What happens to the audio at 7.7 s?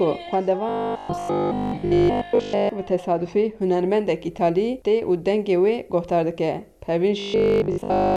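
At 7.7 s the audio is inside a stretch of robotic sound from repeated short buffers, running from 7.20 s to 8.16 s. The likely cause is new audio arriving too seldom, so the playback keeps looping the last fragment, which fits a 20 ms buffer, while the real material is skipped. Essentially the whole span is repeated this way, and the looping imposes a fixed pitch of 50 Hz, heard as a rigid, metallic buzz.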